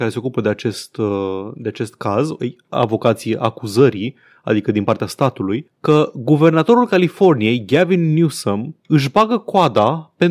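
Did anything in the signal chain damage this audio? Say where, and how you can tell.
No, nothing in the signal chain has left an audible mark on this speech recording. There is no point at which any stage, from the wiring through to playback, shows itself as having altered the sound.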